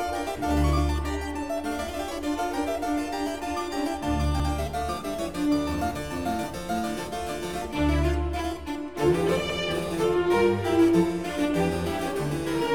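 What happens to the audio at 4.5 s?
Overlapping chunks at 4.40 to 4.50 s: the audio appears to be handled in 5.0 s blocks, and the next block begins 100 ms before the previous one finished, so that 100 ms of sound plays twice, heard as a brief stutter at the join.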